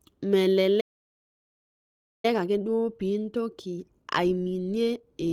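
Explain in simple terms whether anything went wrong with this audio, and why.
Two things went wrong here. At 0.8 s the speech cuts out mid-flow and stays silent until about 2.25 s, roughly a second and a half of nothing. That's a playback stall. The player most likely ran dry of incoming data, or got held up, and simply had nothing to send to the speakers until it caught up again. The talking then resumes.

From 2.25 s to about 5.11 s you get the time-compressed catch-up. To make up for the backlog left by the stall, the player trims out tiny slices and blends the gaps, so the speech runs about one and a half times faster than normal. The pitch stays put, so it doesn't sound chipmunky, just rushed. The light compression from the Opus codec sits underneath all of this too, but it isn't what causes the gap or the hurrying.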